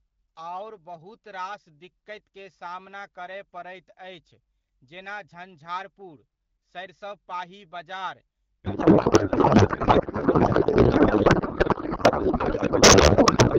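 Speech carried over AMR wideband at 12.65 kbit/s, lightly coded, suffers a codec payload misread from 8.64 s, just after "जेना झंझारपुर सरिसबपाही बजार", to the end. The speech turns into garbled warbling noise, likely from octet-aligned AMR being unpacked as bandwidth-efficient, and a spectrogram shows harmonic structure dissolving into smeared noise.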